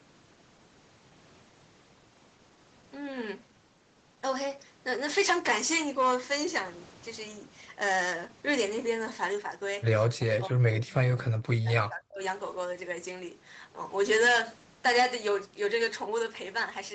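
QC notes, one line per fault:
10.15–12.2 s, speech suppressed in double talk: the speech sinks by as much as about 40 dB for roughly two seconds, likely because the echo canceller could not separate this talker from overlapping far-end sound and turned both down, all within a call band ending near 8 kHz.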